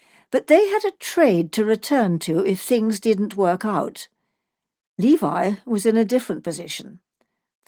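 No technical faults can be heard in this speech.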